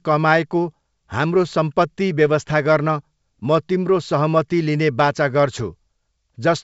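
Nothing stood out on listening to this speech, which carries the bandwidth of G.722 wideband telephone coding, with nothing above about 7.7 kHz.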